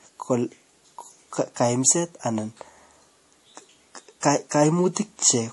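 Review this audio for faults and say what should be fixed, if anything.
MP3 compression damage runs throughout: the speech has nothing above 11.5 kHz and a watery, swirling texture as weak frequency lines drop in and out between frames. This fits a starved bitrate around 48 kbps, likely from MP3 encoding. Prevent it by encoding at a much higher bitrate or keeping a lossless master.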